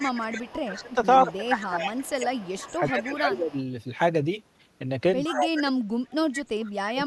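A far-end echo canceller that likely failed to remove its loudspeaker pickup causes echo leak from 0.0 to 0.93 s, 1.26 to 2.23 s and 2.64 to 3.62 s. The speech is shadowed by a copy arriving 120 ms late, about 15 to 20 dB quieter. Likely the same canceller, confused by both sides talking, causes speech suppressed in double talk from 0.67 to 3.57 s. The voice dips by up to about 15 dB over roughly two seconds. Echo leak returns at 5.24 to 5.35 s and 6.12 to 6.42 s, louder at about 10 dB below the speech. Speech suppressed in double talk recurs from 5.29 s to the end, with drops reaching about 35 dB that nearly cut the speech out.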